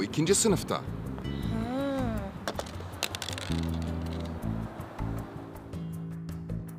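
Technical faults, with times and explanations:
1.18 to 1.21 s, loud pop: a single sharp pop lasting about 20 ms, peaking a few decibels above the surrounding sound, which carries on underneath without a break. The likely cause is a sudden voltage step or spike entering the signal chain, such as a plug being seated, a switch operating or a static discharge. The circuitry downstream shapes that brief pulse into the short, percussive transient heard here.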